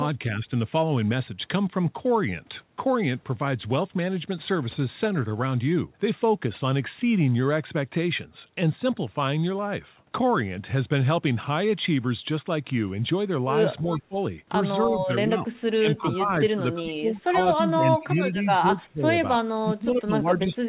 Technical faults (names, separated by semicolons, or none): speech suppressed in double talk; echo leak